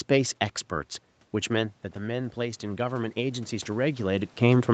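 From 1.33 s to 4.36 s the speech and the room noise behind it swell together, climbing steadily rather than jumping. This is automatic gain rising: after the input level dropped by about 9 dB, the gain control gradually raised its gain by about 7 dB.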